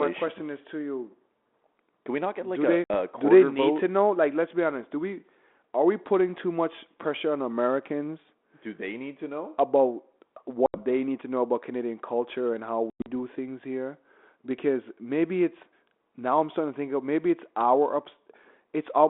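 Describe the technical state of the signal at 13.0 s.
At 13.0 s the speech is inside a burst of packet loss on an ADPCM call, running from 12.9 to 13.11 s. About 140 ms of the 160 ms span is gone, with the longest run near 100 ms, which fits roughly seven lost packets. The dropouts are filled with silence, and the decoder's predictor and step size lose sync with the sender's. When audio resumes, it is slightly distorted briefly before settling. On a waveform this shows as flat-line gaps with abrupt edges. On a spectrogram it appears as blank vertical strips across the 250 Hz to 3.5 kHz band of the 32 kbit/s G.726 line.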